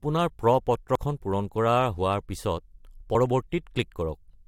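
Damaged data in a compressed stream shows up twice in this speech clip, as brief chirps or blips at about 0.95 s and 3.14 s. At each point part of the encoded stream has been corrupted, so the decoder misreads the affected frame, loses its lock on the frame structure and has to hunt for the next valid header before normal playback resumes. The result is a momentary glitch in the speech.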